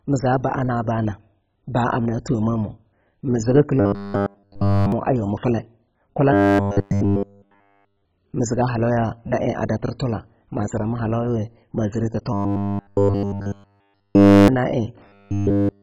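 Throughout, the speech is dull and granular, with a gurgling, flickering quality. This is likely heavy MP2 compression at a low rate such as 16 kbps. Unlike MP3 swirl, the damage comes as whole upper sub-bands switching off.

From 3.80 to 4.92 s, just after "amna thomamah mii zigi" and before "a yuwa", the voice turns into a rigid metallic buzz at 100 Hz. The same robotic sound from repeated short buffers returns from 6.33 to 8.05 s, ending before "mii ziga halauya na"; from 12.33 to 14.48 s, after "zirana halauya ma zire"; and from 15.07 s to the end. The cause is likely a 10 ms buffer replayed over and over while new audio is skipped. The fixed 100 Hz pitch sets it apart from a stutter or dropout.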